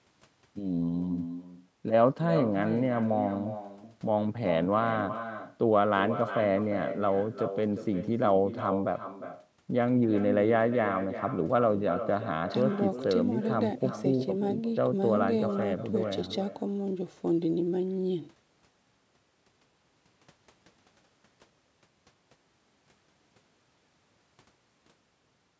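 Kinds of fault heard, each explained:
Echo with no canceller: the far end's loudspeaker leaks into its microphone unchecked, so the speech returns around 400 ms later as a thinner copy about 10 dB quieter. Unlike room reverberation, it is a distinct delayed repeat, not a smooth decaying tail.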